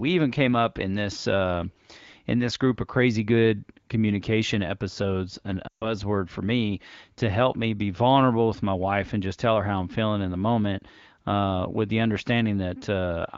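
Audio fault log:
5.68–5.92 s, lost AMR speech frames: radio errors made a run of consecutive frames fail their checksums, about 140 ms of audio, which fits roughly seven 20 ms frames. Just after "good communication episodes an", the wideband decoder keeps reusing its last good pitch and vocal tract settings at falling gain. The sound drops to near silence within two frames, then returns weak or rough for a moment before "for me to help".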